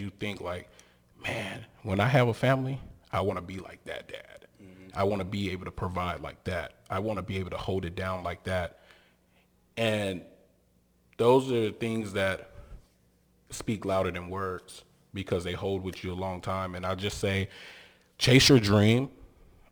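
Crude rate conversion runs through the whole of this speech recording. The sample rate was changed with no filtering, simply by keeping the nearest sample and dropping the rest. The pattern of the error fits a 48 kHz to 44.1 kHz conversion. Each sample's timing error repeats in a fixed cycle, which creates spurious tones unrelated to the voice, roughly 25 dB below it. These are heard as a gritty, inharmonic fizz that rides on louder and brighter syllables.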